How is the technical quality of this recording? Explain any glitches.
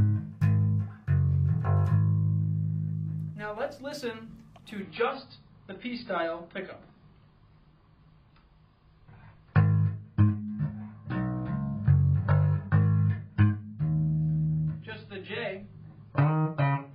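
The recording has one fault. From 4.81 s to the end, the audio plays as an adaptive stream at a lower bitrate. When the connection slowed, the player switched to a much leaner encoding of the same audio, which fits a drop from around 96 kbit/s to about 16 kbit/s AAC. To fit that budget, the encoder discards everything above 5 kHz, so the treble vanishes abruptly. The remaining band sounds dull and smeared with codec artefacts, yet playback never pauses or gaps.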